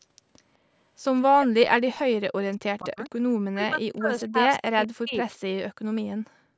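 At 0.00 to 0.05 s and again at 0.36 to 0.42 s there is an echo leak. The far end's echo canceller likely let its loudspeaker pickup through, so a faint copy returns 202 ms late, about 35 to 40 dB below the speech.

From 1.32 to 2.16 s and 2.55 to 2.98 s, speech is suppressed in double talk. With both sides talking, the canceller likely turned this talker down along with the echo, and the speech drops in pieces by as much as about 40 dB, for roughly 0.7 s and 0.4 s.

The echo leak returns at 3.04 to 3.21 s, louder at about 30 dB down. Suppression then strikes again from 3.45 to 5.28 s, affecting around 1.5 s of speech.

From 6.22 to 6.52 s the background is gated by the echo canceller. The canceller clamped the microphone while its loudspeaker played, so the room sound falls by about 38 dB for roughly 0.2 s before recovering.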